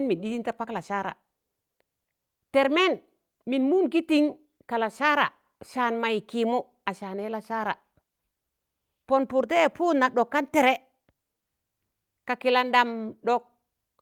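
Nothing technically wrong turns up anywhere in this speech recording, so there's honestly no problem to point to here.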